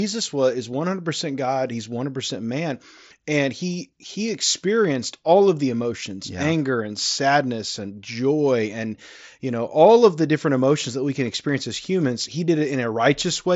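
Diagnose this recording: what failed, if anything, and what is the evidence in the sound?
Nothing failed in this recording: the speech comes over a Bluetooth mSBC headset link working as intended, with the sound stopping near 7.7 kHz as that path would have it.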